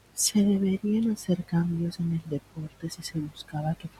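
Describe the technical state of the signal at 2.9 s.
At 2.9 s you're inside a stretch of speech cut by the noise suppressor, running from 2.51 to 3.15 s. It mistook bits of speech for the room noise, about 23 dB down, and pulled them down by up to about 12 dB, roughly a tenth of a second in all, so they sound swallowed.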